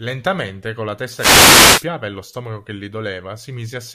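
At 1.14 s, just after "con la", a wireless microphone noise hit sets in and lasts until 1.87 s, ending before "e lo stomaco che". The RF signal from an analogue FM radio microphone dropped into a fade, likely from reflected paths cancelling the direct one. The receiver's noise floor rose through that interval, heard as a burst of static and swish lasting about three quarters of a second.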